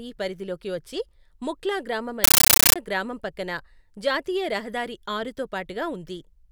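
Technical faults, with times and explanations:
2.24–2.76 s, compressed stream played as audio: after "పరిధిలోకి వచ్చే ముఖ్లా గ్రామం" the speech turns into loud, chattering static, 13.3 ms noise bursts at 31.25 per second. That's raw Dolby Digital data taken as samples, fitting a 640 kbps AC-3 stream. Speech returns at "గ్రామం పక్కన జాతీయ రహదారి".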